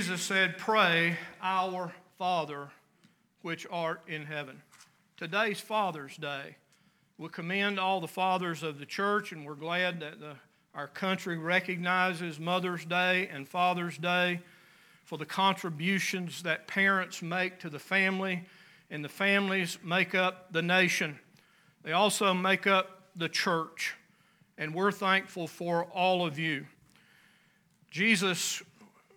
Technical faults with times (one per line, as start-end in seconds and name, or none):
none